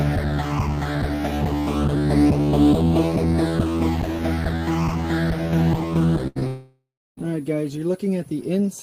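A cluster of network-related faults sits in the last third of the audio, all within about one second. The first is a burst of packet loss from 6.27 to 6.37 s. Roughly 80 ms of audio never arrived, and the receiver bridged it by extending the last sound and turning it down, so it comes across as a held, fading tail rather than a hard gap. When playback resumes, it picks up later in the stream, with those 80 ms gone.

Almost immediately after, at 6.39 to 6.43 s, there is a short concealed packet loss of about 20 ms. This hole is small enough that the decoder's fill, a continuation of the preceding sound blended back into the real signal, registers only as a brief smear or wobble rather than an audible break.

From 6.47 to 7.19 s the sound cuts out for about 0.7 s. The last sound is first stretched into a fading buzz or hiss, and for roughly the final 0.3 s of the gap there is only silence. 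Audio then returns at 7.19 s, with the intervening stretch missing. The likely cause is a long network dropout, in which nothing reached the receiver for most of a second, so its concealment faded out before real audio resumed.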